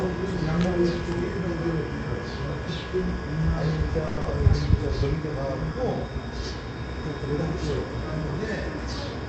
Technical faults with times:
4.07-4.19 call audio freeze
4.21-4.26 short concealed packet loss

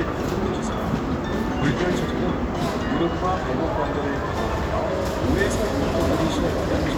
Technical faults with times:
none

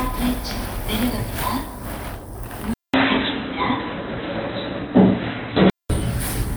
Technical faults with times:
2.74-5.90 input switched to a poorer device

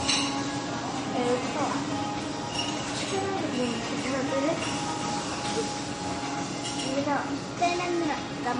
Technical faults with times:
0.00-8.60 MP3 compression

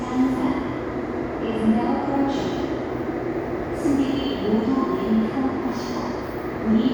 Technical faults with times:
none

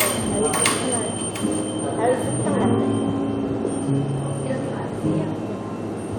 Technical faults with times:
none

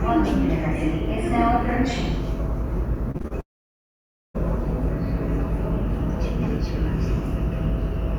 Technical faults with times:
3.11-3.32 repeated packet loss (robotic sound)
3.40-4.36 long network dropout

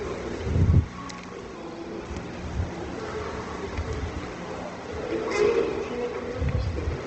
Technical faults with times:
0.00-7.07 Opus compression

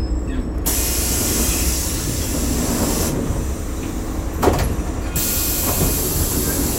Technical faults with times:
none

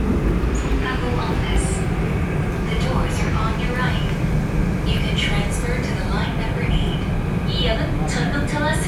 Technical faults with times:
none

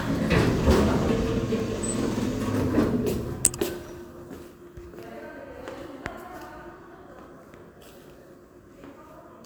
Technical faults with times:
1.60 block of digital silence
3.45 block of digital silence

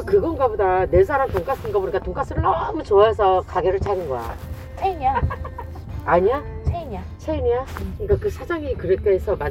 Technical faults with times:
none

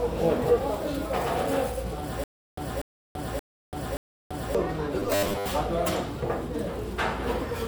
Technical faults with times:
2.24-4.55 stutter with silent gaps
5.00-5.51 robotic sound from repeated short buffers

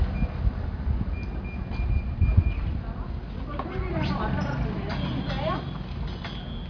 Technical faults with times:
none

